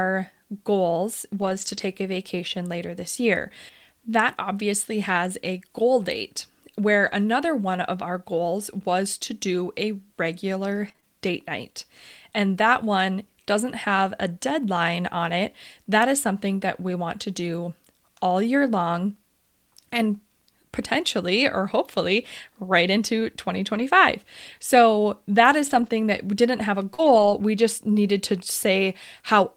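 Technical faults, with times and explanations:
1.41–1.79 s, 7.03–7.13 s, 23.74–23.80 s, 25.66–25.88 s and 26.98–27.32 s, lost packet rebuilt from error correction: Missing speech was replaced by coarser backup copies, about 200, 60, 40, 120 and 180 ms long. There is no gap, but these stretches sound grainier and noisier. The waveform shows no dropout.
10.88–11.04 s, repeated packet loss (robotic sound): Three quick gaps, the longest 24 ms, were each patched by extending the preceding sound. About 39% of this span is concealment, so it turns choppy. A spectrogram shows smeared, repeated harmonic slices, and the waveform shows short periodic stretches.
26.94–27.00 s, short concealed packet loss: About 40 ms never arrived and was filled with a continuation of the preceding sound. It is heard as a brief smear just before the rebuilt stretch that follows. The spectrogram shows a short, blurred patch, with a smooth but unnaturally steady waveform.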